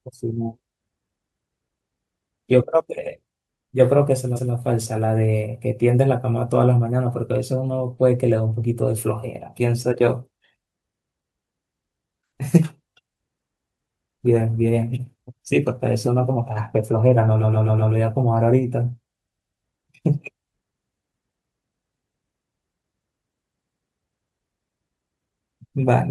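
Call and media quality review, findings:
Repeated frames in the speech: audible stutter, same short span replayed. 3.03 to 3.11 s, an 85 ms block heard twice. 4.35 to 4.52 s, a 171 ms block heard twice. 17.41 to 17.92 s, a 128 ms block heard five times. 19.24 to 19.63 s, a 128 ms block heard four times. 23.64 to 23.81 s, an 85 ms block heard three times. Block lengths fit whole frames of about 43 ms, pointing at the encoder or transport resending compressed frames. Adds about 1.3 s in total.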